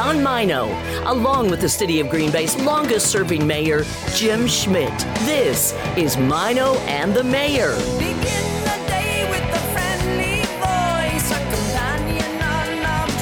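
No technical faults can be heard anywhere in this audio. Nothing in it calls for any technical explanation.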